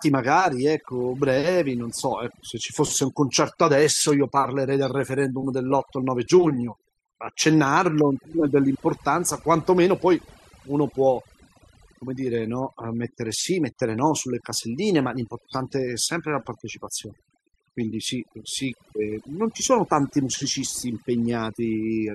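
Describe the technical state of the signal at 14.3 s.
At 14.3 s the gaps around the speech fall to an unnatural near-silence sprinkled with twinkling specks. This is overdone noise removal, present across the entire clip rather than at this moment alone. A noise reduction stage set too aggressively is cutting individual frequency bands deep whenever their level sits close to its noise estimate, so the softer components of the voice are stripped away with the background noise.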